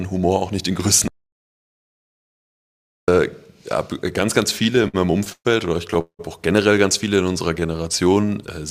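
At 1.08 s the audio cuts out in mid-flow and stays silent for a full 2 seconds, picking up again at 3.08 s. That's a playback stall. The player most likely ran dry of data or had its output thread blocked, so nothing reached the output until it recovered. You hear a clean, dead hole rather than any buzz or fade.

Between 4.63 s and 5.47 s things get choppy. It's a run of repeated stalls, a stutter. Across that stretch there are nine small hold-ups, the longest about 122 ms, and together they account for about 254 ms of filler, roughly 30 percent of the span. Packets kept showing up late, the jitter buffer kept emptying, and each time the receiver stretched out the last bit of sound until fresh data came in. Nothing actually goes missing, but the audio drags and hiccups through that section.

At 6.01 s there's a short call audio freeze lasting until 6.21 s. The sound hangs on as a fading buzz for a moment and then drops to silence for about 100 ms, with about 180 ms filled in total before it carries on right where it left off. 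The likely cause is packets held up in transit long enough to empty the buffer, which pushes everything after it later by about 180 ms.

From 7.09 s to 8.27 s there's a jitter buffer slow-down. The receiver was rebuilding its reserve by repeating tiny pitch-period-sized slices over and over, adding about 154 ms. Playback runs at about 88 percent speed with the pitch unchanged, so sounds come out drawn-out.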